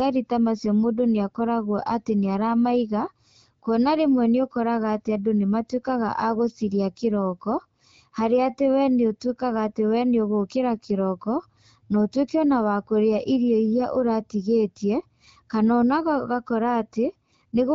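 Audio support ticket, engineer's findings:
No faults found.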